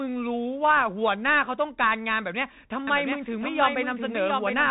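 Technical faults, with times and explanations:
Throughout: Bluetooth CVSD headset codec. The speech is confined to the narrow headset band, with nothing above 3.8 kHz, and the one-bit delta coding, which fits 64 kbit/s CVSD, leaves scratchy sibilants, overload grit on loud peaks and a granular hiss. A spectrogram shows a hard ceiling near 3.8 kHz above a speckled noise floor.
2.87 s to the end: doubled audio track. A second full-band copy of the speech enters abruptly, trailing by roughly 0.7 s and about 5 dB quieter, with no decay or room colour, likely from a second, slower capture path. The waveform shows the same envelope repeated, offset and smaller.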